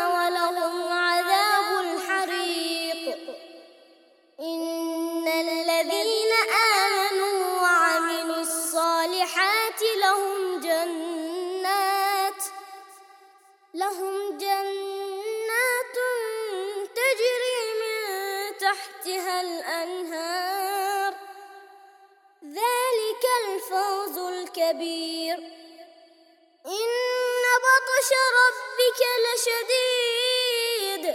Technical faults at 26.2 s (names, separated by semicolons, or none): none